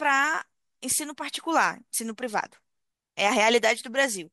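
Speech, with no audible faults.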